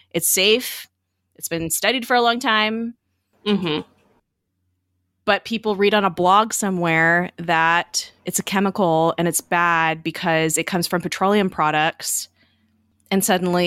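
No technical faults heard.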